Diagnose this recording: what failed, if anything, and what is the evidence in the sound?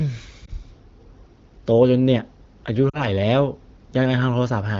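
Lost AMR speech frames on the radio link: a brief dip or warble at 0.45–0.50 s, fitting one dropped 20 ms frame, and a fading stretch dropping to near silence at 2.89–3.06 s, fitting two. The decoder repeats stale pitch and vocal tract settings at falling gain, so a spectrogram shows frozen, dimming harmonics and the waveform envelope sags.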